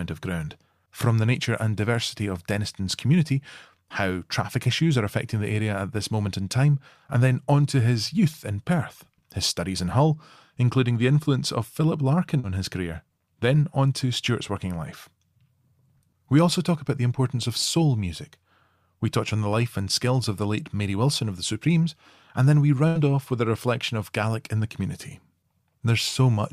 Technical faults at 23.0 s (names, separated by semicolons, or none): burst of packet loss